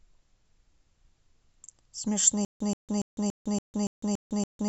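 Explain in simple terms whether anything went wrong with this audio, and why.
Yes: from 2.45 s to the end, a stutter with silent gaps. A 130 ms fragment repeats eight times, each followed by 155 ms of dead silence, which sets it apart from simple dropouts. This likely comes from a stalled stream replaying its last piece.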